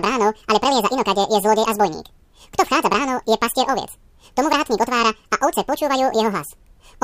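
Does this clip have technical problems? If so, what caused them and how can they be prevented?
Yes. Throughout the speech, the audio was read two samples at a time (double speed): the reader treated each pair of samples as a single frame, as though the stream had two channels or samples twice as wide, and so took in the audio twice as fast as it was recorded. The result plays at 2x speed and a full 12 semitones, one octave, higher. Prevent this by declaring the channel count and sample width explicitly at both writer and reader, and checking that they match.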